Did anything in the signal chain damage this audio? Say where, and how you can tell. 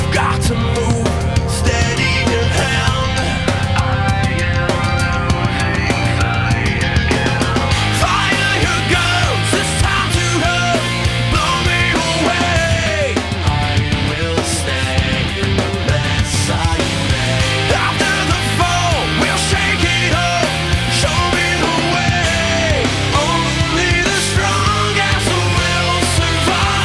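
No, nothing in the signal chain audibly damaged this audio, and the signal holds steady throughout with no audible break, distortion or dropout at any stage.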